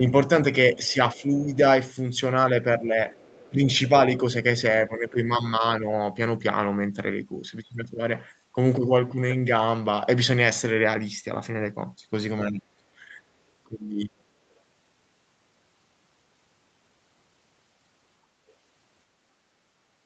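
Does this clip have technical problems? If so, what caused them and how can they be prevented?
Yes. Speech suppressed in double talk occurs at 0.75–1.31, 2.79–2.98, 3.5–4.23, 4.87–5.87, 12.5–12.83 and 13.68–14.23 s. The talker dips, from slightly to deeply, likely because the echo canceller turned everything down while both sides spoke. Unlike random dropouts, these dips track the other side's speech. A headset removes the echo it struggles with.

Other side's voice leaking through occurs at 0.83–1.57 and 3.1–3.49 s. A faint second voice sits far below the talker, likely loudspeaker echo the canceller missed. It is a separate voice, not a distortion of the talker's own. A lower speaker volume or a headset prevents it.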